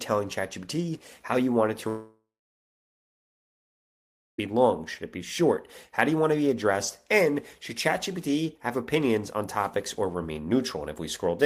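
At 1.88 s the audio breaks off and does not return until 4.39 s, a gap of about 2.5 s consistent with a long network dropout. The receiver first stretches the last sound into a fading buzz-like tail lasting roughly a third of a second, then leaves about 2.15 s of silence. When the audio resumes, the intervening material is simply absent, likely because a run of packets never arrived and could not be recovered.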